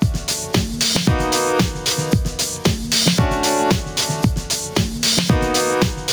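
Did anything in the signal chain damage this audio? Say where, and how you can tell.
Yes. Gain pumping runs through the whole clip. The input gain is likely set far too high, so a fast limiter clamps down on every loud sound, swinging the level by around 15 dB. Loud and soft parts end up closer in level, leaving everything squashed.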